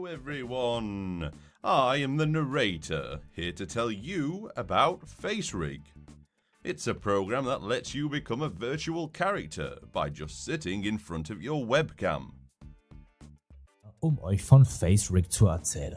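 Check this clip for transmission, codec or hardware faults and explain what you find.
Nothing stood out on listening to the clip.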